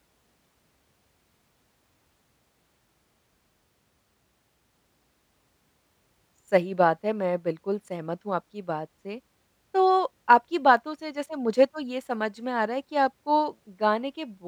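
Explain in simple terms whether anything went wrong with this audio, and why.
Listening to this speech recording, nothing stood out as having gone wrong.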